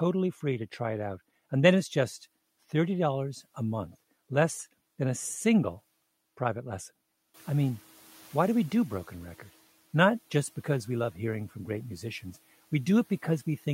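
Right after "a single private lesson", around 7.3 s, the room noise jumps by about 13 dB. The noise suppressor is caught up short, letting the noise through before sinking it by about 7 dB by 9.35 s. A spectrogram shows a raised noise floor fading over 2 s.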